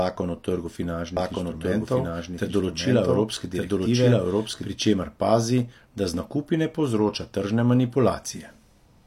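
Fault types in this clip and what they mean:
doubled audio track: From just after "o trgu" at 1.17 s until 4.67 s, where "pri čemer pazi" follows, a second full-band copy of the speech runs about a second behind the original at roughly the same level. It has no tail or room colour and cuts in and out abruptly, which separates it from a natural echo or reverb that fades. The likely cause is a second capture path or an edit leaving two copies out of step.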